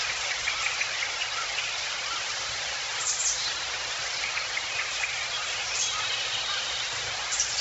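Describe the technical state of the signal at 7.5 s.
At 7.5 s the audio is still running through what is likely Bluetooth LC3 compression, as it does throughout. Starved upper spectrum leaves nothing above 7.7 kHz and a heavy, grainy noise-filled edge, which fits roughly 16 kbps with 10 ms frames.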